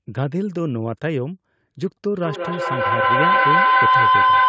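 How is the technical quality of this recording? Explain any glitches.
The recording has one serious fault in the speech. From 2.07 s to the end, a feedback howl takes over. Two devices in the same room form a loop that gains level on each pass. A tone near 1 kHz builds, with the loop repeating roughly every fifth of a second, and peaks about 7 dB above the speech. The call's microphone processing leaves nothing above 8 kHz.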